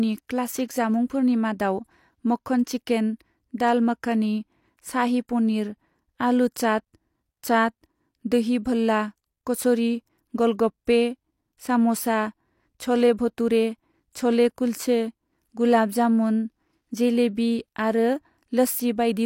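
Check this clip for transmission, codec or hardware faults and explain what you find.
One codec fault is audible, a brief pre-echo near the start of the speech.

At 0.68 s there is pre-echo: a short hiss runs ahead of a sharp onset for about 18 ms, and the attack itself sounds blurred rather than crisp. A transform codec quantised that block as a whole, so noise scaled to the loud onset also filled the quiet instant before it. On a spectrogram this appears as a thin broadband smear just before the onset's vertical edge. In the waveform, low-level fuzz precedes the jump in amplitude.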